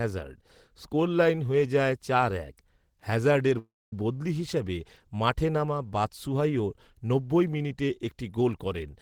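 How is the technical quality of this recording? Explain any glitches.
A single glitch stands out in this speech: from 3.58 to 3.93 s the sound stops and is replaced by a brief fading continuation of the last moment, then roughly a quarter second of silence, before speech resumes with "বদলি হিসেবে মাঠে নামা". Nothing seems lost. The talk simply picks up late, about 336 ms behind. This is a call audio freeze, likely from delayed packets draining the jitter buffer, so the receiver padded the wait instead of skipping ahead.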